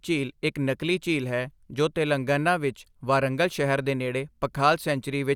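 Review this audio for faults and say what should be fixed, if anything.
Nothing to fix; no faults turned up anywhere in the speech recording.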